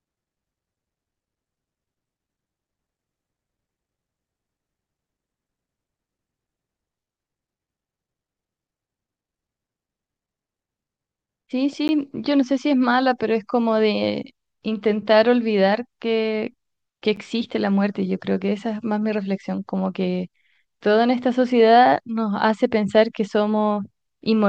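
Speech with two blocks of digital silence, at 11.88 s (about 13 ms) and 17.16 s (10 ms). The samples drop straight to silence and return with no fade, so each hole is heard as a short tick. This is the gap left when the output buffer is not filled in time or a calculation yields invalid values. The abrupt edges and flat silence distinguish it from a faded dropout or concealed packet loss.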